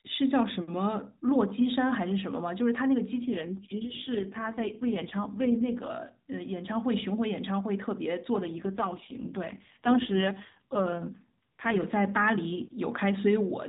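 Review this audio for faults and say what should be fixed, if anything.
Speech turns rough, buzzy and synthetic at 3.19–5.92 s and 8.36–11.86 s. This is an AMR rate drop, fitting a fall from 12.2 to 4.75 kbps. Improving radio coverage or pinning the codec to its 12.2 kbps mode would prevent it.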